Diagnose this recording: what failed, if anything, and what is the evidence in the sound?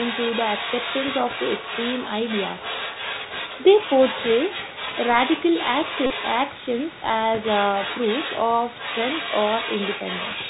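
Codec stage: the Bluetooth CVSD headset codec is plainly audible throughout, with scratchy sibilants and granular hiss. A spectrogram shows nothing above 4 kHz, which points to narrowband 64 kbps CVSD.

Call processing: the other side's voice leaks through, a second voice about 10 dB below the talker from 0 to 7.04 s and again from 7.4 to 10.5 s. The likely cause is residual loudspeaker echo the canceller missed, visible as a faint overlapping harmonic layer.

Wireless link: a Bluetooth headset packet was repeated from 6.06 to 6.10 s. About 37.5 ms of repeated 3.75 ms frames gives a 267 Hz buzz, seen as periodic waveform repetition and spectrogram striping.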